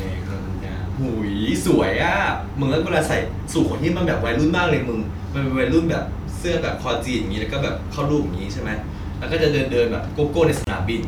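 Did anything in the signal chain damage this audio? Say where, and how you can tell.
Yes. A gap at a join of encoded pieces opens from 10.64 to 10.67 s, a gap of about 28 ms that cuts into otherwise continuous speech, with its edges softened by codec smearing. The speech then resumes exactly where it stopped. This points to the codec stage: the audio was encoded in separate pieces and joined without trimming, so the encoder's start-up delay and last-frame padding remain as a hole in the signal.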